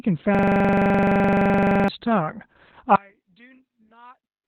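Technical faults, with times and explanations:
Throughout: Opus voice compression. The speech sounds muffled, hoarse and slightly robotic, with nothing above about 4.4 kHz. That fits Opus in its SILK speech mode at narrowband width, where the bitrate, probably around 8 kbps, is too low for the wider band. SILK models the voice as a filter driven by an excitation signal. At this rate that excitation is coded very coarsely in 20 ms frames, so the texture turns rough and synthetic.
0.35 to 1.88 s: system hang loop. A single 42.67 ms slice of sound repeats exactly, some three dozen times. That gives a rattling stutter at about 23.4 Hz in place of moving speech. The computer or its audio driver stalled, but the sound hardware kept replaying the same ring buffer. The loop length fits a 2048-sample buffer. Normal audio resumes once the system recovers.
2.96 to 4.48 s: one channel inverted. The speech suddenly drops by about 34 dB, leaving only a faint residue until the end. 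The likely cause is one stereo channel flipped in polarity, so that when the channels are summed to mono, everything common to both cancels. The voice, centred and nearly identical in each channel, almost vanishes. Only the small difference between left and right remains audible.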